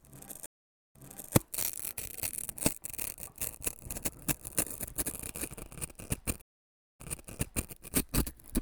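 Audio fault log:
0.46–1.35 s and 6.41–7.70 s, stream reconnect: the connection dropped, leaving about 0.47 s and 0.56 s of silence. A fresh decoder then picked up from a server resend, so the sound jumps back about 0.42 s and 0.73 s, repeating material, and eases in as the first frame fades in.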